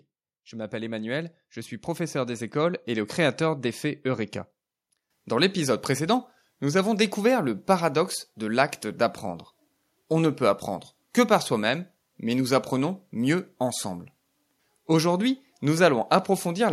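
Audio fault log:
0.49–3.46 s: automatic gain rising. The level of the speech climbs steadily by about 10 dB across these three seconds. The background rises right along with it, so the whole scene swells rather than the talker simply getting louder. The gain control judged the incoming signal too quiet and kept turning its own amplification up. It did so slowly, which is why the rise is a smooth ramp and not a jump.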